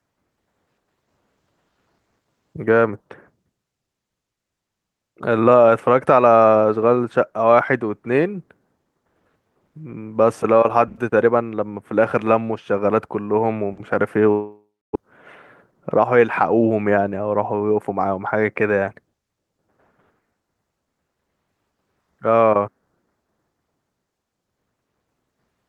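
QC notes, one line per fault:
14.31–15.03 s, long network dropout: packets likely stopped arriving, so the receiver stretched the last sound into a fading buzz, then silence; about 0.6 s never plays.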